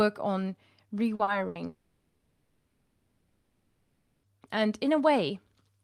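Speech that starts to break up just after one second. At 1.15 to 1.22 s and again at 1.23 to 1.30 s there are two quick smeared wobbles, each covering about 40 ms. Each is a short concealed packet loss: a small piece of the stream arrived too late to decode, so the receiver stretched the preceding sound to bridge the hole before blending back into the real signal. Two such patches so close together make the moment sound briefly blurred. A heavier break follows at 1.47 to 1.58 s. The sound hangs for about 80 ms as a sustained buzz or hiss that sinks in level, then the audio picks up further along with that stretch gone. That is a burst of packet loss: several consecutive packets failed to arrive, and the concealment extended the last sound while fading it. The most serious fault runs from 1.67 to 4.26 s, about 2.6 seconds in which no real speech is heard. The last sound is drawn out and dies away, about 0.22 s of that span is outright silence, and when speech returns it is further on, with everything in between lost. 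This is likely a long network dropout, where the incoming stream stopped entirely and the receiver could only fill the gap with fading continuation and quiet until packets began arriving again.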